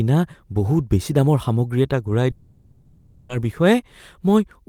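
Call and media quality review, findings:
Long network dropout, 2.31–3.31 s. Concealment fills the whole 1 s gap: last sound continued as a fading buzz, no silence. Likely upstream packet loss; missing speech never recovered, audio resumes afterwards.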